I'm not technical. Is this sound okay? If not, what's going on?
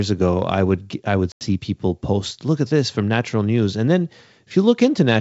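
No. There is one fault: packet loss on an ADPCM call, from 1.32 to 1.47 s, right after "I would I would" and before "people post". About 90 ms of audio, around ten small packets, never arrived and became a hard-edged silent gap. The decoder predicts each sample from the previous ones, so after the gap it is briefly out of step with the sender. The speech comes back slightly distorted before settling.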